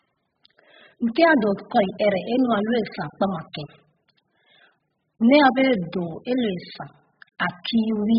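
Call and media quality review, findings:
Dull, smeared speech throughout, nothing above 5 kHz, fizzy warble on sibilants. Likely AAC compression at a very low bitrate, around 8 kbps. Encoder dropped the top band and coarsely quantised the rest.

Pre-echo at 3.53 s: brief hiss about 12 ms ahead of a sharp attack, onset softened. Transform codec spread block quantisation noise into the quiet lead-in before the transient.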